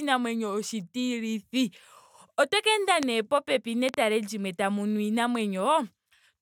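A sharp single crack cuts across the speech from 3.03 to 3.05 s, peaking around 20 dB above it, then a quick double pop from 3.89 to 3.96 s, around 15 dB up, just before "limwe tamu nu". The speech continues beneath both. This is a loud pop, most likely a voltage step or spike from a plug, switch, static discharge or driver glitch, shaped by the downstream circuitry into brief thumps.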